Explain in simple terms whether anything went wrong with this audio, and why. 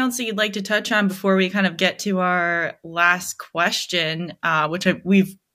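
Something did go wrong, briefly, at about 1.09 to 1.18 seconds, right after "like to touch on" and just before "we kind of get". That short swish of static is a wireless microphone noise hit: the radio signal from the microphone to its receiver faded for a moment, and the receiver's own hiss rushed in over the speech. Unlike a digital dropout, which leaves a clean gap of silence, this fills the gap with noise.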